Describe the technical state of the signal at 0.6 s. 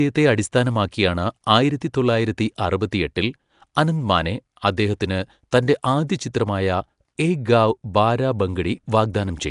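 At 0.6 s the speech carries a rough, hissy halo and a smeared, underwater quality, with nothing above about 10.6 kHz. This runs through the whole clip and is likely Nellymoser compression: fixed two-bit blocks starve weak bands, which are refilled with noise.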